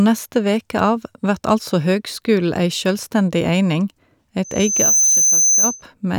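Loudspeaker feedback squeal appears from 4.44 s to 5.83 s. A microphone is picking up the loudspeaker it drives, and at about 6.2 kHz the round-trip gain tops unity, so that frequency reinforces itself on every pass. A thin, piercing whistle swells over roughly half a second, then holds at a level a few decibels above the speech, sitting on top of it until the tone cuts off at 5.83 s.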